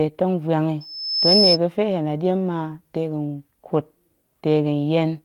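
From 0.80 to 1.58 s there's a loudspeaker feedback squeal: the mic is catching its own speaker, and the loop runs away at one pitch. You hear a thin 5.2 kHz whistle swell over roughly half a second until it sits well above the speech.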